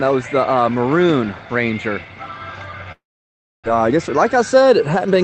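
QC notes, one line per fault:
2.92–3.68 s, long network dropout: audio stops arriving, likely from a network outage. The last sound is stretched into a fading buzz, then roughly 0.64 s of silence before playback resumes with about 0.6 s of material gone. On a spectrogram: smeared, decaying harmonics, then an empty band.
3.75–5.23 s, jitter buffer speed-up: after the gap the buffer holds surplus audio, around a tenth of a second, so the receiver trims pitch-period-sized slices repeatedly. Playback runs about 6% fast at unchanged pitch, sounding hurried; the waveform shows slightly compressed events without spectral shift.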